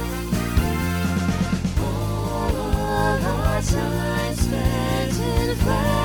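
No technical faults can be heard anywhere in this clip.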